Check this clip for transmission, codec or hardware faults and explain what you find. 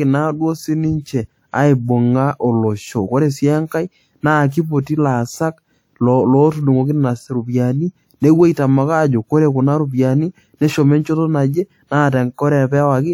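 One codec fault is present. Pre-echo occurs from 3.67 to 3.71 s, a short hiss lasting about 41 ms just before a sharp onset in the speech. The transform codec spread its quantisation noise across the whole block, so noise sized for the loud attack spills into the quiet stretch ahead of it and leaves the onset sounding soft and smeared.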